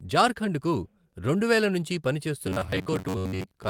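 From 2.47 s to the end, the speech collapses into robotic sound from repeated short buffers: a rigid, metallic buzz near 94 Hz. The likely cause is audio arriving too seldom, so roughly half the signal is a replayed 10.7 ms chunk, seen as identical repeating waveform cycles and evenly spaced horizontal harmonic bands on a spectrogram.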